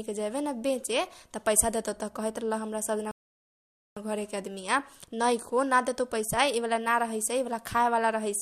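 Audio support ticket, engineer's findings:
Rebuffering stall, 3.11–3.97 s: speech drops to silence, resumes exactly where it stopped. Player buffer ran dry awaiting download; nothing lost, 0.85 s added.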